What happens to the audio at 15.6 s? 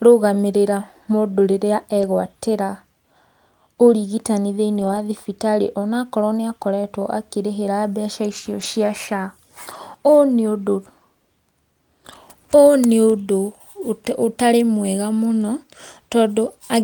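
At 15.6 s the audio is intact, with no fault at that moment.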